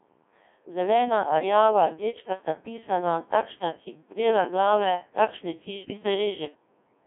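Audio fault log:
Throughout, Codec 2 vocoder: the speech is robotic and buzzy, with a synthetic tone. The band runs from about 200 Hz to 3.5 kHz, with nothing above 3.8 kHz. Only pitch, voicing, loudness and a rough spectral shape survive; the decoder rebuilds each sound from sine waves instead of keeping the original waveform. The heavy smearing points to a very low rate, around 1.6 kbit/s.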